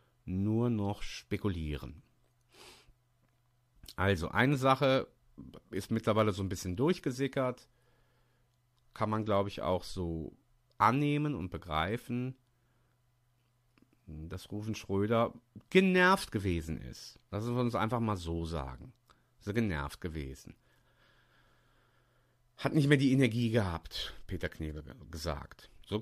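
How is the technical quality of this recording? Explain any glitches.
The recording has a clear technical problem running through all of the speech: sample clock jitter. The converter's clock wobbles by a few microseconds, so samples land slightly off time. Steep, fast-changing parts of the waveform suffer most, leaving a gritty hiss roughly 35 dB down that swells on loud, bright sounds and drops away in the pauses.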